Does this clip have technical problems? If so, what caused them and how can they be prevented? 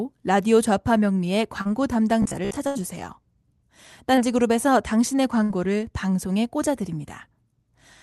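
Yes. A brief smear in the speech at 1.61 to 1.67 s, and an even shorter wobble at 4.15 to 4.19 s, are short concealed packet loss. At each point a few hundredths of a second of audio arrived too late. The decoder covered roughly 36 ms and then 19 ms by extending the preceding sound, then blended back into the real signal. A short consonant can disappear inside such a patch. Prevention: a steadier network path, or a modestly deeper jitter buffer, keeps isolated packets from missing their playout time.

From 2.22 to 2.57 s the speech turns into a rigid, metallic buzz pitched at about 67 Hz. It still follows the rough shape of the utterance. This is robotic sound from repeated short buffers. Audio was arriving too seldom, so the playout side kept looping its last chunk. The buzz period fits a buffer of about 15 ms, and roughly half of that stretch is repeats rather than new audio. The likely cause is irregular delivery to the audio device. 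Prevention: giving the audio thread stable scheduling and a buffer matched to the device period stops the looping.

A held buzz or fading hiss, followed by a jump forward, appears at 2.67 to 2.77 s and again at 5.43 to 5.51 s. These are bursts of packet loss. Consecutive audio went missing, about 80 ms the first time and 60 ms the second. The receiver stretched the last sound while turning it down, then resumed with that stretch of speech gone. The Opus call path can be heard around these events with its normal band limit near 12 kHz. Prevention: forward error correction or redundancy in the codec lets the receiver rebuild lost runs instead of concealing them.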